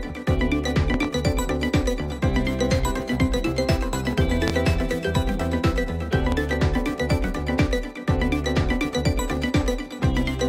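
Likely electrical transients inject loud pops: doubled at 0.94–1.07 s and 6.32–6.56 s, single and strongest at 4.48–4.51 s, with the sound continuing underneath.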